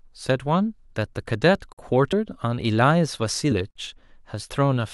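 At 1.73 to 1.78 s there is a gap between chunks. A hole of about 48 ms interrupts the speech. It recurs at 3.71 to 3.76 s, 2 s later. This fits audio delivered in 2 s chunks with silence left at each join. No speech is lost.

Compressed frames are skipped at 2.12 s and 3.51 s. The decoder drops whole frames of about 23.2 ms each, so speech jumps ahead, by roughly 50 ms and then 20 ms.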